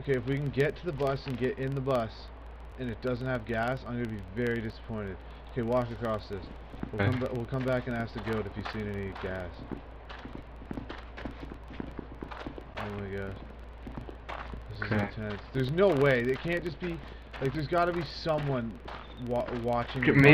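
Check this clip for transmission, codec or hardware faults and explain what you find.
Two faults are present: a low buzz running through the whole clip, and six brief dropouts at regular spacing.

Throughout, a filter restarted on every block produces a steady tick-like buzz at about 21.5 Hz, which fits a 2048-sample block. The filter loses its stored state at each block boundary and starts again from zero, leaving a small transient at each boundary. The buzz rises and falls with the signal level.

A gap between stream segments appears at 2.72, 4.72, 6.73, 8.73, 10.74 and 14.75 s. Each is a hard-edged silent hole of roughly 4 to 5 ms at the 2-second segment spacing. Timestamps leave space between adjacent segments, and the player fills that space with silence. No audio is lost.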